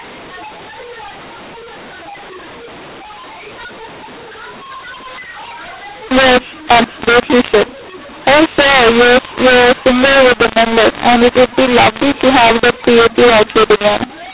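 Throughout the clip, mu-law and A-law are mixed up: the telephone speech was encoded with the G.711 mu-law curve but decoded as A-law, so each 8-bit code is expanded along the wrong logarithmic scale. Sample levels come back scrambled, some inflated and others shrunk, while the quietest values are pushed well above silence. The narrowband 8 kHz speech, with nothing above 4 kHz, sounds harsh and distorted, and every pause fills with noise instead of going quiet.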